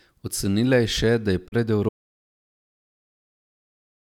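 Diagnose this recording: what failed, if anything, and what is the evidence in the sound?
Digital broadcast dropout at 1.47 to 1.54 s, just after "je še da je". The fault sits in reception and decoding. The speech fades out over about 20 ms and sits muted before the sound returns, a hole that fits one corrupted or missing frame of about 32 ms. The receiver could not trust that frame, so it faded to silence instead of decoding garbage, and whatever was transmitted in that window is lost.

Audio dropout to silence from 1.89 s to the end of the clip. From that point the signal drops to silence, with no room tone or noise floor underneath, and it never comes back. A silent stream means the capture chain kept writing samples while receiving nothing. The likely stage is the input path, a disconnected source, failed link or accidental mute ahead of the recorder, and everything after 1.89 s is gone.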